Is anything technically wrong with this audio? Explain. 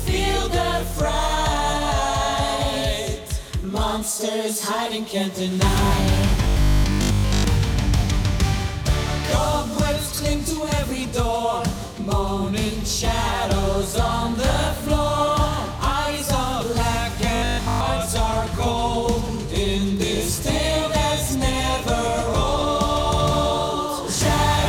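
Yes. Robotic sound from repeated short buffers occurs from 6.44 to 7.44 s and again from 17.37 to 17.83 s. The likely cause is new audio arriving too slowly, so the playback fills the gaps by looping the last chunk while most of the real material is skipped. The repeats impose a rigid 50 Hz buzz, which points to a chunk of about 20 ms, and the sound turns metallic and mechanical while loosely tracking its original contour.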